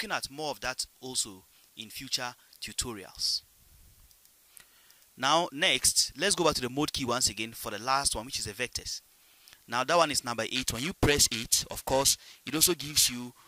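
From 10.55 s to the end, periodic clock jitter appears. The converter clock wobbles at around 1 kHz, adding sidebands. High content turns rough and metallic.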